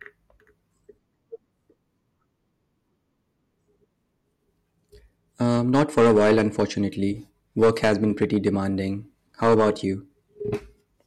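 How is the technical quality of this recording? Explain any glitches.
The recording has one recurring problem in the second half of the speech. Hard clipping occurs from 5.43 to 6.64 s, from 7.61 to 8.48 s, and from 9.43 to 9.70 s. In each stretch the signal is driven about 9 to 10 dB beyond what a stage in the chain can pass, so the peaks are sliced flat. Those squared-off tops add harmonics high in the spectrum, heard as a harsh, crackling fuzz on the louder parts of the speech.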